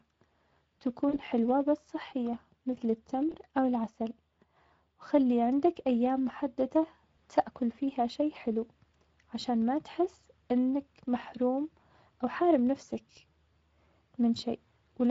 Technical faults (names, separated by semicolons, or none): Speex codec; VoIP packet loss concealed by the speech codec